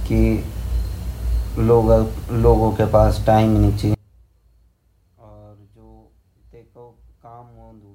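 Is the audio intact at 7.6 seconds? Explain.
No. At 7.6 s the speech sits inside an audio dropout to a faint residue that begins at 3.95 s and runs to the end of the clip. The signal cuts off abruptly, leaving only a faint residue roughly 30 dB down, likely from a live path losing its feed. The waveform shows a sudden collapse to a thin trace, and the spectrogram an abrupt fall to near-blank energy.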